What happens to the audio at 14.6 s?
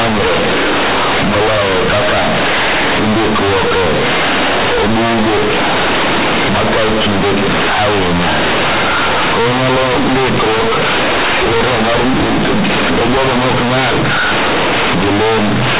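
At 14.6 s the speech is still under the fault that runs through the whole clip: companded audio read as linear. The A-law bytes are being played as plain 8-bit samples without expansion, so every sign change throws the output across about half its range. Quiet passages come out as loud as peaks, giving harsh, buzzy distortion and heavy noise in pauses. The waveform looks like a dense, uniformly large block, and the spectrogram shows broadband smearing up to the 4 kHz telephone limit.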